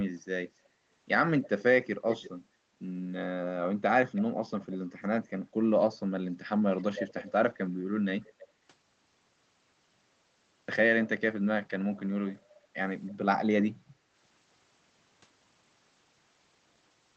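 Delayed, quieter copies of the speech surface at 1.43–1.48, 2.09–2.3, 4.15–4.22, 5.92–5.97, 6.77–7.3, 8.23–8.47 and 13.07–13.11 s. This is an echo leak, likely from a loudspeaker echo canceller that failed to fully remove its microphone pickup. The copies trail the speech by about 320 ms, drifting from 317 to 327 ms, and sit roughly 10 to 30 dB below it.

At 13.95–14.07 s the background is gated by the echo canceller. The room sound dips by about 6 dB for roughly a tenth of a second, then recovers once the canceller releases the microphone. Throughout, the audio carries the limited top end of a call codec path, consistent with Opus running at 8 kHz bandwidth.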